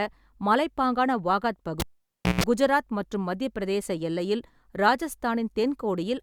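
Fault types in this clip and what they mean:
Cable pulled and plugged in: a live lead yanked and reinserted, so a pop at 1.80 s, about 0.59 s of near silence, a 160 ms 60 Hz buzz, then another pop.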